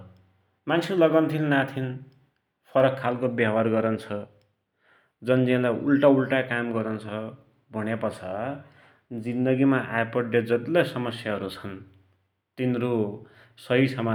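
No technical faults occur at any point in the speech, so there is nothing to describe in time order.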